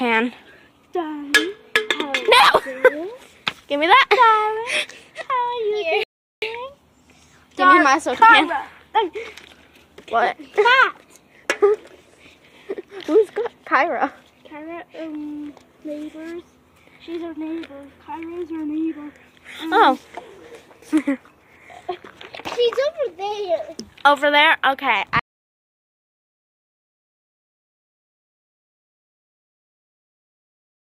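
At 6.03 s the playback halts in a rebuffering stall lasting about 0.39 s, until 6.42 s. The player exhausted its downloaded buffer and paused while waiting for more data. When data arrived, playback resumed at exactly the sample where it stopped. Nothing is skipped. The gap is pure inserted time, heard as a brief hard silence followed by the sound picking up seamlessly mid-flow.

From 25.19 s to the end of the clip the sound drops abruptly to silence, an audio dropout to silence that never recovers. The gap holds no room tone or noise floor at all. The likely cause is that the input signal was lost, through a disconnected source, a failed link or a mute, while recording or encoding continued writing empty samples. Whatever occurred during those last 5.8 s is gone.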